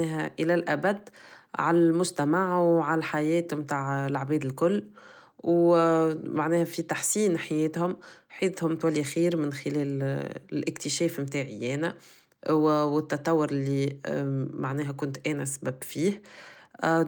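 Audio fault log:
No fault to log for this audio.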